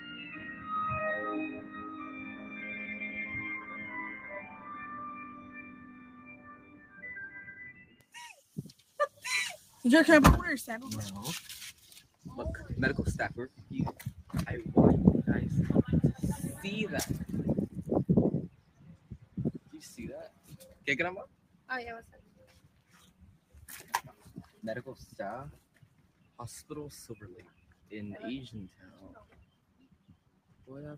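A noise suppressor built for speech has been applied to this audio, and it treats sustained material as noise. Throughout the clip the level swings by about 15 dB as the processor clamps down and releases. Onsets and sharp transients pass largely intact, while held tones, ambience and reverb tails are pulled under, so the sound pumps and thins. An ordinary compressor or gate reacts to level alone. This suppressor reacts to steadiness, so quiet transients survive and loud sustained sound is still cut.

The sound is cut by the noise suppressor in six stretches: 0.0 to 3.15 s, 4.42 to 8.12 s, 12.03 to 12.23 s, 18.48 to 24.61 s, 25.6 to 26.39 s and 27.46 to 30.65 s. The deepest drops are about 8 to 10 dB, the worst near 4.42 to 8.12 s. Within the longer spans only parts sink, around two to three seconds each, and decays end early rather than fading naturally. This is not a dropout, because the sound never vanishes outright and sudden attacks still come through.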